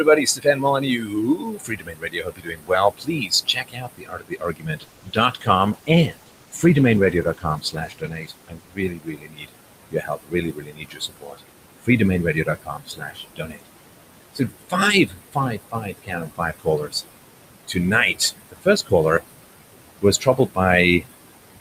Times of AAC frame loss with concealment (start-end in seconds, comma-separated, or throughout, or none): none